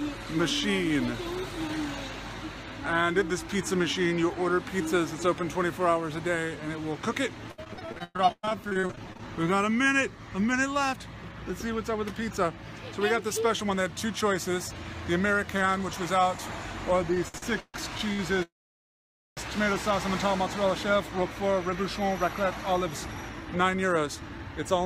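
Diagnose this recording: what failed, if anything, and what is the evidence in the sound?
From 7.51 to 9.22 s the sound turns choppy, with 22 short holes, the longest 113 ms, filling about 40% of that stretch. This is repeated packet loss on the network: the receiver patched each gap by extending the previous sound, and about 600 ms of audio is simply gone.

The audio hurries at unchanged pitch from 10.93 to 11.61 s (106% speed), 12.23 to 12.45 s (114%), and from 23.01 s to the end (111%). This is jitter buffer speed-up in the receive buffer, which trimmed pitch-period slices to drain excess delay, removing about 50 ms, 40 ms and a fifth of a second.

Between 17.15 and 18.21 s the sound drags and stutters through six short stalls, the longest 138 ms, making up about 30% of the span. These are repeated stalls in the jitter buffer: late packets left it empty, the receiver stretched the last sound each time, and nothing is missing.

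From 18.43 to 19.39 s the audio freezes. A brief continuation of the last sound fades into roughly 870 ms of silence, then resumes where it stopped with nothing lost. This is a call audio freeze, likely from packets held up on the network while the jitter buffer ran dry, adding 940 ms of delay.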